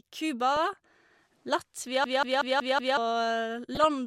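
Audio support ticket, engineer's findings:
DAB burbling, 0.56–0.78 s. Weak DAB reception; residual bit errors, a fraction of a percent, slip past error correction into MP2 data. Corrupt scale factors and samples make sub-bands jump in level frame by frame, giving bubbling, chirping squelch over the speech.

DAB burbling, 3.74–3.85 s. Same receiver path, slightly lower error rate. Shorter burst of corrupted MP2 frames; brief squelchy gurgle on the speech.

System hang loop, 2.04–2.97 s. Host or audio driver froze while the output hardware kept replaying the same ring buffer. One 186 ms segment repeats exactly 5 times at 5.4 Hz, fitting an 8192-sample buffer. Machine-gun stutter; about a second of speech lost.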